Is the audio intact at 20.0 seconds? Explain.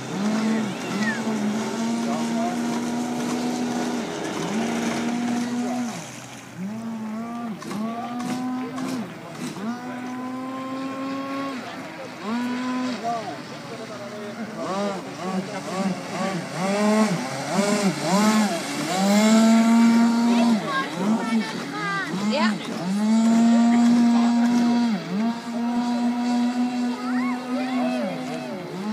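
Yes, the audio is intact at 20.0 seconds, with no dropout, glitch or other fault audible at that point.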